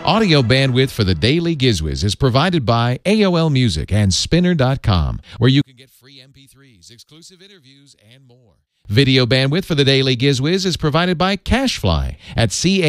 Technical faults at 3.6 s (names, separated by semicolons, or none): none